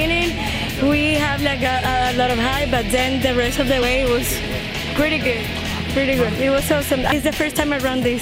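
At 3.82 s and again at 7.12 s there's damaged data in the compressed stream: corrupted bytes make the decoder misread those frames and lose sync while it hunts for the next valid header, so each spot comes out as a quick glitch.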